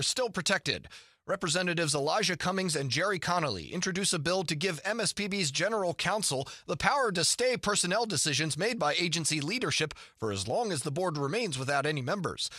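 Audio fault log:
No audible faults anywhere in this speech recording.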